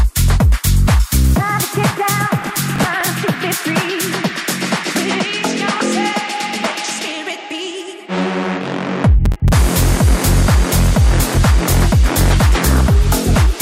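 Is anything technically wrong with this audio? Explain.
Yes. There is processor overload crackle at 2.42 to 3.07 s and again at 9.26 to 9.53 s. In each burst the processor falls behind, missing around ten short buffer deadlines, which fits buffers of roughly 5 ms, and each miss replays a fragment of old audio with abrupt edges. It sounds like gritty tearing over the sound. The waveform shows jagged, repeated slivers with step discontinuities, and the spectrogram shows thin vertical broadband streaks clustered in those spans.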